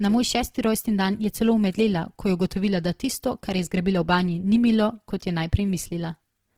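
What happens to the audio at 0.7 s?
At 0.7 s the speech carries Opus compression, present across the whole clip: the sound is rough and grainy, likely from a low-bitrate CELT encode that fills starved bands with folded or noise energy. A spectrogram shows smeared, noisy upper bands without clean holes.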